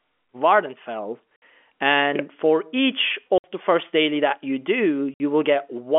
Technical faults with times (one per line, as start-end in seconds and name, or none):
1.36-1.42 packet loss filled with silence
3.38-3.44 packet loss filled with silence
5.14-5.20 packet loss filled with silence